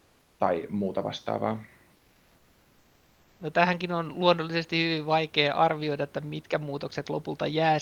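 Comfort noise replaces the room background at 0.0–0.39 s, before "tai muuta", and at 1.95–3.39 s: flat, featureless hiss about 2–3 dB quieter, likely from Opus DTX pausing transmission.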